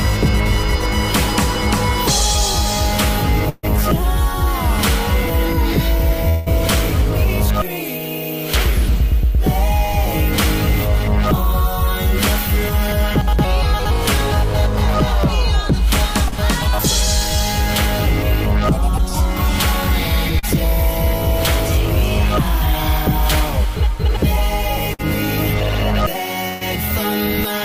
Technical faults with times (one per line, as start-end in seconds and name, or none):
3.49-3.65 burst of packet loss
6.29-6.48 long network dropout
16.28-16.34 short concealed packet loss
18.98-20.59 scattered short gaps
24.93-25.01 burst of packet loss
26.49-26.63 burst of packet loss